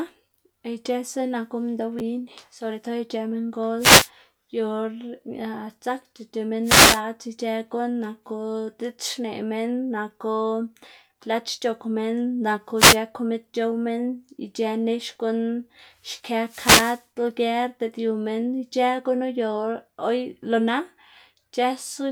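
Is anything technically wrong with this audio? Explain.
Yes, the speech has wireless microphone noise hits at 3.78–4.10 s, 6.63–7.02 s, 12.76–12.98 s (right after "c̲h̲ok minn naku") and 16.44–17.06 s. Each is a brief swish of static where reflected radio paths cancel, the FM signal fades and receiver hiss rises over the voice. On a spectrogram each appears as a short broadband noise smear, and on the waveform as a fuzzy burst.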